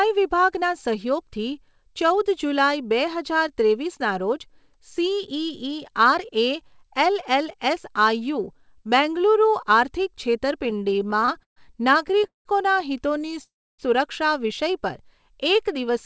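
Repeated stalls (stutter) appear from 10.66 to 11.58 s, with around fifteen brief holds, the longest 131 ms and roughly 30% of the span concealed. They recur from 12.08 to 12.47 s with fewer but longer holds, up to 184 ms and covering about 59% of that span, and again from 13.19 to 13.37 s as four tiny catches of 13 ms or less. Packets were reaching the receiver more slowly than playback consumed them, so the jitter buffer kept draining. Each time, the receiver extended the last sound until data resumed. Nothing is lost, but the speech drags and stammers, with the longer holds fading audibly.

A call audio freeze follows at 13.43 s and lasts to 13.81 s. For about 350 ms the receiver filled in while playback waited, and roughly 290 ms of that is near-silence after the held sound dies away. The likely cause is packets held up in transit long enough to empty the buffer outright. Playback then resumes where it stopped, about 350 ms later than before, so a gap is inserted rather than audio removed. 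Throughout, the band stops at 8 kHz, which fits a wideband call codec such as G.722.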